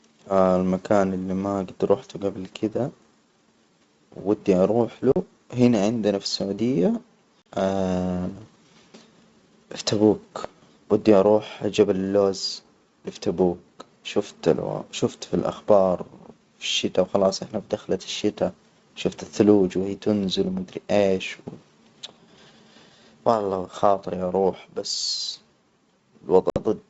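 At 5.12 to 5.17 s, between "ودي أروح" and "هنا عندنا في السعودية", packet loss on an ADPCM call cuts out about 40 ms, roughly two packets. A second 40 ms hole follows at 7.42 to 7.46 s, just after "هنا عندنا في السعودية", and a longer 60 ms gap, about three packets, falls at 26.50 to 26.59 s. Each hole has hard edges, visible as a flat, empty stretch in the waveform and a clean vertical gap across the spectrogram. Because the missing packets were filled with silence, the decoder's predictor and step size drift away from the sender's. The speech therefore resumes slightly distorted, settling over the next few tens of milliseconds.

A loud pop lands at 7.59 to 7.61 s, peaking a little above the speech. Another sits at 10.44 to 10.47 s, between "في تبوك" and "ودي أروح جبل اللوز", standing well above it. Each is a single sharp pop riding over speech that continues underneath. In the waveform each is a narrow spike, and in the spectrogram a thin vertical line spanning the band that the G.722 coding carries up to 7 kHz. 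The likely cause is a sudden voltage step or pulse from a plug, switch, static discharge or driver glitch.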